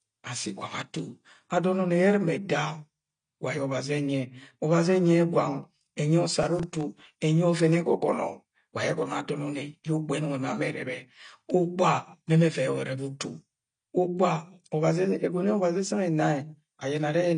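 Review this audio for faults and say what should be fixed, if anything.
The whole speech clip has no content above 9.8 kHz, and the coding damage is plainly audible. That points to AAC compression. The likely cause is AAC-LC at a low bitrate, which fits about 32 kbps. The codec discards the upper band and coarsely quantises the rest. To prevent it, encode at a higher bitrate or keep a lossless master.

From 6.38 to 7.16 s there is processor overload crackle. The processor missed buffer deadlines about twenty times. Each miss replayed a scrap of old audio with hard edges. The very short buffers fit roughly 1.5 ms each. Together the misses form a gritty burst. To prevent it, use larger buffers or reduce processing load.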